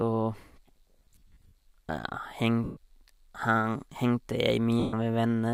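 From 0.96 to 1.52 s the speech breaks up with lost LE Audio frames. About 330 ms of audio is missing, scattered over 560 ms in short gaps, the longest around 50 ms, which fits 10 ms LC3 frames. The decoder fills each gap by repeating the last spectrum with randomised phase, so voiced sound turns into a hissy smear. Shorter single dropouts of 130 ms follow at 2.64 to 2.77 s and 4.80 to 4.93 s, each fading toward silence as concealment decays.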